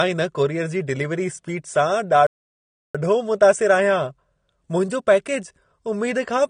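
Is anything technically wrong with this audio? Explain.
Yes, there are two faults. AAC compression runs throughout: the speech sounds dull and smeared, likely from low-bitrate AAC-LC coding consistent with about 32 kbps. A playback stall from 2.27 to 2.95 s silences the speech for about 0.68 s mid-flow, likely because the player ran short of data before resuming.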